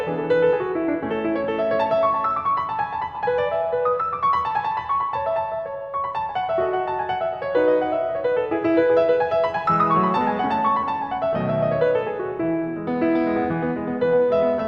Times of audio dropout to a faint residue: none

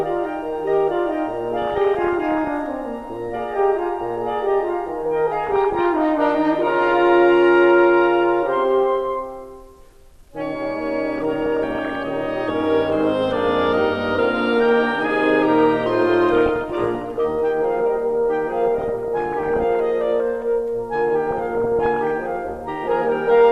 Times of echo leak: none

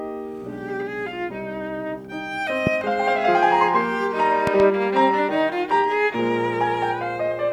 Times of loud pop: 2.67-2.69, 4.47-4.62

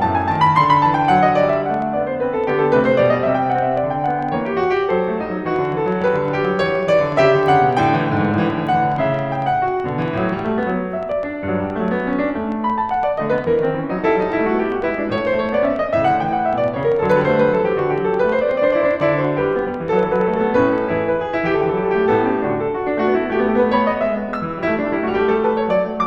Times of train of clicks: 0.04-20.79

